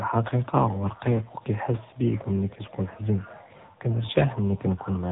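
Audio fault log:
Throughout, AMR narrowband mobile codec: the speech stops dead near 3.8 kHz and carries a heavy, buzzy, synthetic edge from pulse-driven vocal-tract modelling, which fits a low mode around 6.7 kbps. Unlike a simple telephone-band filter, the voice sounds rebuilt rather than merely dulled.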